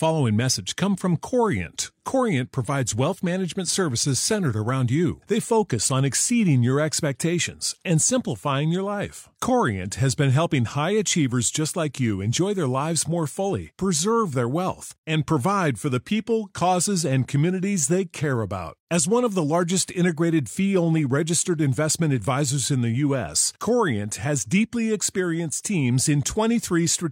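No technical faults can be heard anywhere in this speech recording. Nothing in the audio calls for a timestamp or an explanation.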